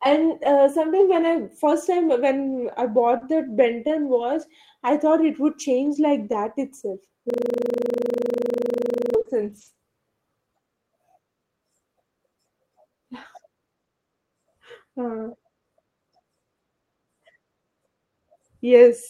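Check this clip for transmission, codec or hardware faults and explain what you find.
Three faults affect this speech clip: scattered short gaps, a system hang loop, and lost packets rebuilt from error correction.

Between 3.17 s and 9.77 s, the network lost or delayed a few packets, about three spread across the stretch, with the longest hole around 40 ms. The receiver covered each hole by extending the audio just before it, so nothing drops to silence. Roughly 100 ms of speech is missing in total, which shows up as brief ticks or smeared hiccups in otherwise clear speech.

From 7.30 s to 9.15 s, a system hang loop occurs. The computer or driver stalled while the audio hardware kept replaying the same 40 ms buffer, 46 times in a row. The passage stops advancing and becomes one tiny slice repeated at 25 Hz. That repeat rate is fast enough to run together into a rough, buzzy stutter, close to a low steady drone rather than separate repeats.

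From 15.09 s to 15.27 s, a lost packet was rebuilt from error correction. Packets went missing, but each following packet carried a low-bitrate backup copy, and the decoder played those copies. The result is about 100 ms of speech with no gap, but it sounds coarser and noisier than the surrounding audio. The length fits five separate lost packets.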